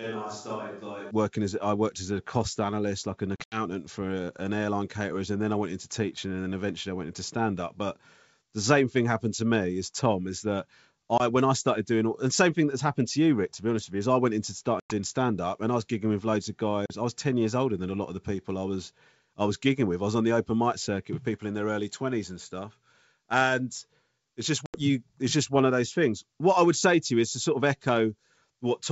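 From the start until about 1.1 s the speech sounds hollow and roomy, about 10 dB quieter, with more room noise. That's likely a switch to a distant microphone before the close one comes back. Then there's packet loss on an ADPCM call at 3.36 to 3.62 s, 11.18 to 11.21 s, 14.80 to 14.94 s, 16.86 to 16.92 s and 24.66 to 24.79 s. Each is a hard-edged silent gap, and the speech comes back briefly distorted while the decoder resyncs.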